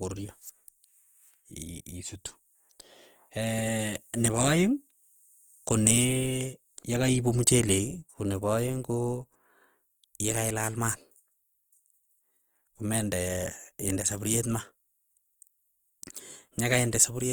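Throughout the speech, the sound is rough and grainy rather than swirly. Starved bands get filled with folded or noise-like content, likely from Opus compression in its music mode at a rate that fits about 24 kbps. A spectrogram shows speckled, noisy texture reaching about 20.2 kHz, without clean gaps.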